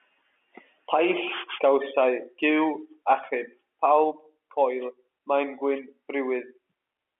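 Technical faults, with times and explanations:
No technical faults can be heard in this speech clip. It carries the narrow band of G.711 telephone coding, with the sound confined to roughly 300 Hz to 3.4 kHz as on an ordinary phone line.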